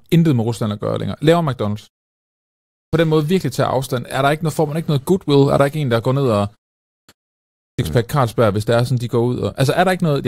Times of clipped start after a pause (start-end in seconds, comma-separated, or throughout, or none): 2.62-2.93, 6.79-7.09, 7.48-7.79